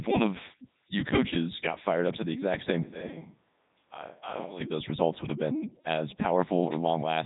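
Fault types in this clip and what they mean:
Codec 2 vocoder: the speech has been passed through a very low-bitrate digital-radio vocoder, the top rate of 3.2 kbit/s going by the character of the damage, which sends only pitch, voicing, energy and a spectral envelope rather than the waveform itself. The decoder rebuilds the speech from summed sine waves, so throughout the clip it comes out heavily robotic and buzzy, with nothing above 3.8 kHz.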